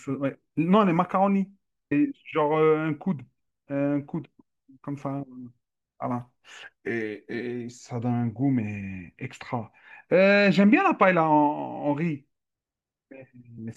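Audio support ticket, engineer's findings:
Brief jumps at 1.91 s and 13.57 s, each dropping about 150 ms of speech. Compressed frames skipped in the decoder: several 24 ms frames missing or rejected.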